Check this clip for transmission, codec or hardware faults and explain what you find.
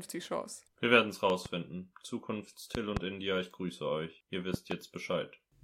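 Three loud pops interrupt the speech, each a quick double pop, at 1.30 to 1.48 s, 2.75 to 2.99 s and 4.54 to 4.74 s. A voltage spike, likely from a switch, plug contact or driver glitch, enters the signal chain. It is heard as sharp thumps about 15 dB, 20 dB and 15 dB above the speech, which continues underneath.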